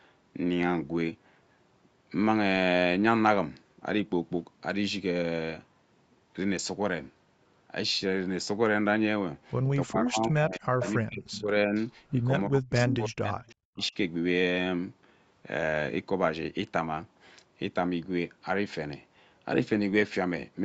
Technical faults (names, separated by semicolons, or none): speech suppressed in double talk; echo leak